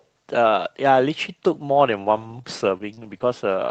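From 2.15 to 3.22 s, repeated packet loss makes the speech choppy and robotic. Seven short gaps occur here, the longest 35 ms. Each gap is patched by extending the sound just before it. Roughly 300 ms is rebuilt this way.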